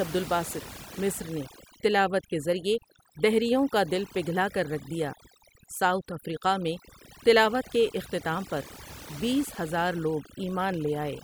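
Throughout the speech, overdone noise removal mutes bands near the noise estimate, leaving twinkling specks in near-silence, unlike a gate's whole-signal cutoffs.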